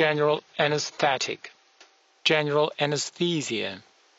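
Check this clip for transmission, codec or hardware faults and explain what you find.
There's one fault here: an adaptive stream starting at a low bitrate. From 0.0 to 2.0 s the treble is thin and the codec artefacts are stronger. At 2.0 s the sound suddenly clears with no gap, which points to the player switching from roughly 24 kbit/s AAC to about 96 kbit/s once it had measured the connection.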